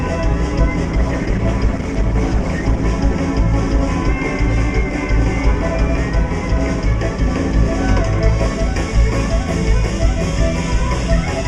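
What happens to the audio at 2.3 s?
At 2.3 s you're in the middle of a stretch where the adaptive stream has dropped to a lower bitrate, running from about 0.85 s to 2.85 s. The player switched to a leaner encoding for those two seconds, so there are more codec artefacts. The drop in quality, which sounds like Opus at around 16 kbit/s rather than 64, arrives and leaves abruptly, with no gap in the sound.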